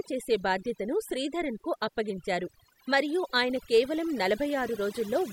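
Speech with overdone noise removal throughout: a background that drops and breaks up into twinkling specks, and a spectrogram showing patchy, gated bands and isolated bright dots between words.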